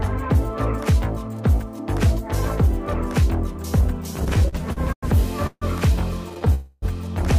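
Packets repeatedly arrived late or too slowly from 4.19 to 5.06 s, so the jitter buffer kept running dry, producing repeated stalls (stutter). Seven times the receiver stretched the last sound to cover the wait, filling 233 ms in all, about a quarter of that span. The longest hold was 100 ms. Nothing is lost, but the audio drags in uneven jerks.

From 5.47 to 5.65 s a call audio freeze is heard, likely from packets held up in transit that emptied the buffer. The last sound is carried on for 150 ms and fades, with about 40 ms of silence, before the audio resumes where it stopped. The result is a 150 ms pause inserted into the flow.

A shorter stutter follows from 6.30 to 6.49 s. Four brief gaps, none over 12 ms and 43 ms in total, make the audio drag and stutter.

From 6.54 to 6.85 s a second freeze holds and fades the last sound for 284 ms without dropping to silence. The audio then picks up where it stopped, now running 284 ms later.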